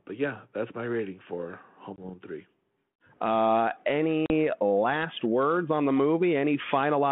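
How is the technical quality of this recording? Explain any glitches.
Two brief dropouts mark this narrowband G.726 ADPCM telephone speech. Packet loss on an ADPCM call: at 1.96 s after "that's my rating for", about 20 ms vanishes, roughly one packet; at 4.26 s, before "last words on the", about 40 ms, around two packets. Silence fills each hard-edged gap, and the decoder's predictor and step size lose track, so speech resumes with brief distortion.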